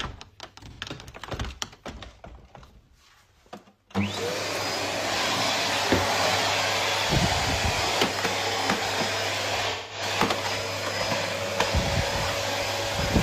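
A smeared, noisy patch at 0.70 to 0.80 s and a longer one at 9.69 to 10.02 s are AAC frame loss with concealment: roughly 85 ms and 213 ms of missing frames, patched from the last good spectrum.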